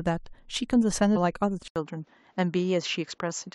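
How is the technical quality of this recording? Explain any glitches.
Quality drops partway through. At 1.68 s, after an 80 ms gap, the speech turns duller, with nothing above 7.6 kHz, similar loudness and a faint new noise floor. This is likely the input switched to a poorer device.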